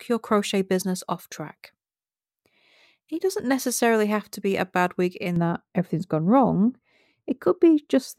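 Speech, dull and muffled from 5.36 s after "a bad week in" to the end: de-emphasis applied wrongly, cutting the highs smoothly by about 11 dB at 10 kHz.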